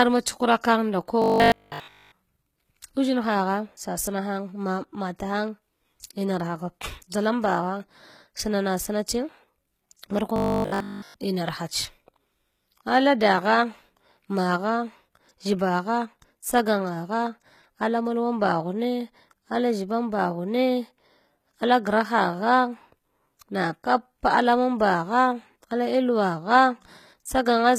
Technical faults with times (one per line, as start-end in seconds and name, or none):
0.00-27.79 HE-AAC compression
1.22-2.12 robotic sound from repeated short buffers
10.36-11.14 robotic sound from repeated short buffers